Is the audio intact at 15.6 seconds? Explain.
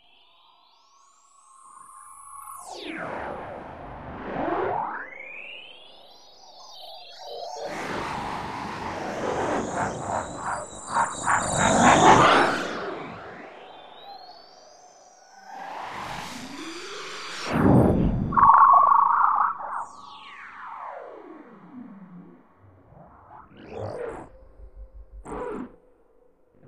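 No, the audio at 15.6 seconds carries channel delay (doubling), which runs through the whole clip rather than appearing as a brief event. One channel arrives about 40 ms after the other, and when the two are folded to mono, that late copy stands apart as a distinct second hit at equal level, a slapback doubling of every sound. A much shorter offset would instead fuse into a hollow, comb-filtered tone, and reverb would decay rather than repeat once at full strength.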